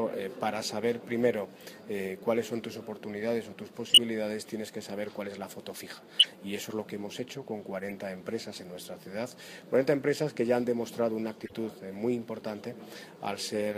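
Four bursts of corrupt frame decoded damage hit the audio at 3.89–4.00, 6.19–6.26, 7.80–7.92 and 11.45–11.52 s. Damaged compressed frames, a handful each, were played anyway, putting energy at wrong frequencies. The first two are louder (about -10 dBFS) than the last two (about -30 dBFS). On a spectrogram they appear as brief, misplaced vertical smears, and on a waveform as short spikes.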